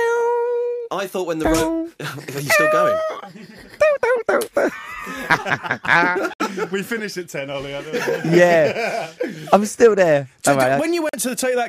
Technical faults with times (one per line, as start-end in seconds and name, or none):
6.33-6.41 Bluetooth dropout
11.09-11.15 Bluetooth dropout